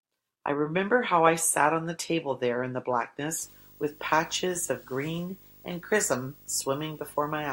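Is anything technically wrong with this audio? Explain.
Yes. From 3.44 s to the end, video or display buzz intrudes. Screen interference couples in, adding a 50 Hz buzz, hash, and a 15.6 kHz whine, together about 25 dB below the speech.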